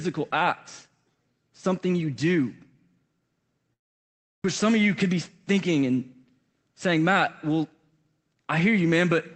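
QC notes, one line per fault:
3.73 to 4.46 s, long network dropout: the speech gives way to a fading buzzy continuation of the last sound, then near-silence or a low steady noise for most of the 0.73 s gap, and it resumes with about 0.6 s of material simply gone. This is likely a stretch where no packets reached the receiver. The concealment stretched the final sound, gave up, and playback picked up later, with the overall delay shifted by around a tenth of a second.
5.04 to 5.92 s, jitter buffer speed-up: the speech briefly sounds hurried, running about 5% faster while the pitch stays put, so the rhythm tightens without any chipmunk quality. The jitter buffer was holding more audio than its target. To drain the excess, the receiver cut out a series of tiny pitch-period-sized slices, roughly 50 ms in total. This is an Opus call path, band-limited to about 8 kHz.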